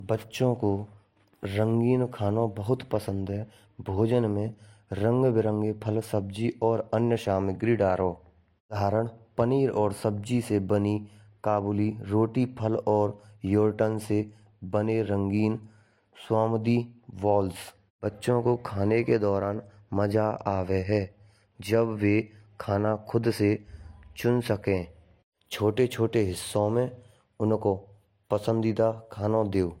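Transcoding between lossy codecs runs through the whole speech clip. Nothing is present above 16.5 kHz, and two kinds of compression artefact are heard together: those of a band-replication codec, then those of MP3 layered over it. This likely comes from an HE-AAC encode at about 40 kbit/s re-encoded to MP3 at about 63 kbit/s. The MP3 stage spent bits on the earlier damage and added its own.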